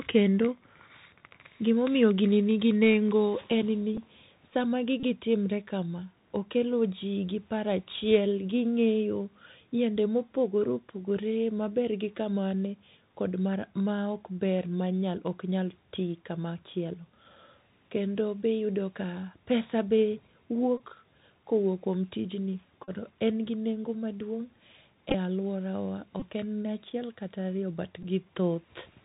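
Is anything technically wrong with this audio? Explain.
Yes. The speech has been through a Bluetooth CVSD headset codec for the whole clip, and there are short packet repeats.

Bluetooth CVSD headset codec, throughout: the damage is plainly audible. The sound has the character of a 64 kbps one-bit delta stream, where each sample only steps up or down and the step size adapts. Nothing passes above 4 kHz, so s sounds come out scratchy and loud high-frequency moments distort when the step can't keep up. A granular hiss sits under the speech. On a spectrogram this shows as a hard ceiling at 4 kHz with a speckled noise floor below it.

Bluetooth headset packet repeated, at 3.97 s and then 5.00–5.04, 20.78–20.81, 22.84–22.90, 25.10–25.15, 26.20–26.23 and 28.03–28.05 s: these are the points where headset packets were lost and the last good packet was decoded again. The shortest, at 3.97 s, covers 7.5 ms. 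The longer ones run 11 to 34 ms, and their 3.75 ms repetition produces a buzz near 267 Hz. At 25.10 s the losses are scattered over 45 ms, with the longest run about 20 ms. A waveform shows short, identical repeating cycles at each point.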